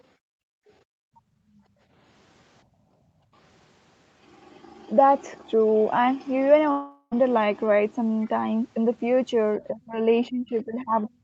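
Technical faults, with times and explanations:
0.16–1.87 s and 2.64–3.34 s, background gated by the echo canceller: the room sound sinks away, by about 31 dB in the first stretch and about 15 dB in the second, then returns. The echo canceller was clamping the microphone while the loudspeaker played, which mutes the ambience along with it.
6.71–7.13 s, long network dropout: the sound smears into a fading buzzy continuation for about 400 ms, then goes silent for roughly 60 ms before resuming with that portion missing. This is likely packet loss long enough that the receiver's concealment ran out.
8.21–8.27 s, other side's voice leaking through: a brief, faint scrap of a second voice surfaces, around 35 dB below the main talker. It is likely loudspeaker echo from the far end that the echo canceller failed to remove completely from the microphone signal.
9.59–9.97 s and 10.29 s to the end, speech suppressed in double talk: the talker's speech dips by around 20 dB, then by around 30 dB in the final stretch. 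The likely cause is both sides talking at once, with the echo canceller attenuating everything it could not separate.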